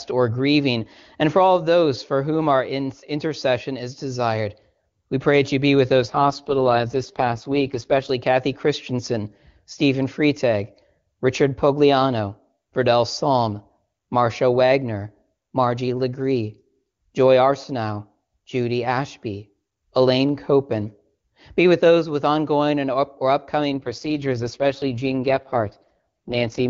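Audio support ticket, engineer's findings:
AMR rate drop, 6.02–8.10 s after "that you be with" and 23.70 s to end after "ongoing and up or". Speech turns rough, raspy, synthetic; no gap, same band. Sound fits AMR-WB stepping down to about 6.6 kbit/s on a weak radio link. Spectrogram: harmonics smeared, noisier top; waveform continuous.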